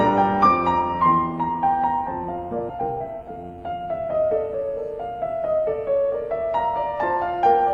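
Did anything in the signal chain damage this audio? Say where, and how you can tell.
Yes. At 2.7 s the network or jitter buffer dropped a stretch of audio, and playback skips ahead with no gap. Roughly 0.7 s of material is missing, and the two sides of the cut are joined almost directly, so the delay fell by that amount.

From 2.79 to 4.30 s a jitter buffer speed-up follows. The buffer was holding more than its target, so the receiver cut short pitch-period pieces in succession. About 150 ms was removed, and the audio runs at 109% speed with unchanged pitch.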